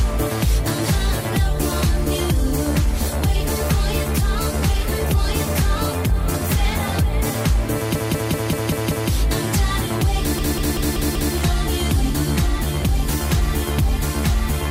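At 7.95 s a 192 ms chunk starts looping, replaying six extra times until 9.10 s. Then from 10.38 to 11.34 s it happens again, five more repeats. That's repeated frames: the same block of compressed frames got sent over and over, giving a stutter.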